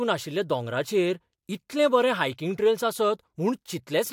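No audible technical faults.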